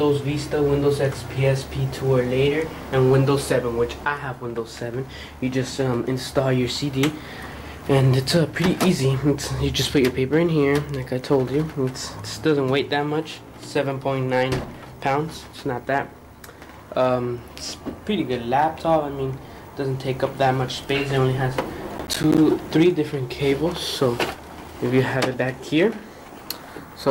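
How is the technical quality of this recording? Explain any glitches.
The recording has one clear fault, a burst of processor overload crackle from 21.98 to 22.38 s. For about 0.4 s the sound breaks into a gritty, tearing crackle and then clears abruptly. The processing could not finish its short audio buffers in time, so deadlines were missed again and again. Each miss left a brief hole of silence with hard edges, which fits buffers of around 10 ms, with something like seven dropped in quick succession. The rapid string of clicks from those edges makes up the crackle.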